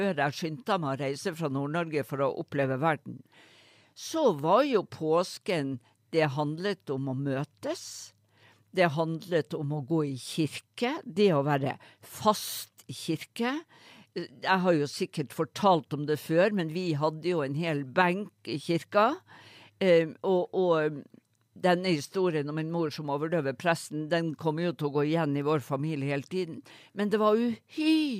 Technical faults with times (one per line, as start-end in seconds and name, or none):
none